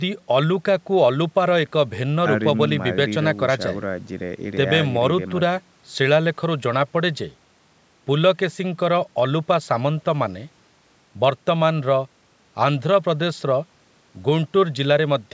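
No technical faults occur at any point in this speech, so there is nothing to place in time order.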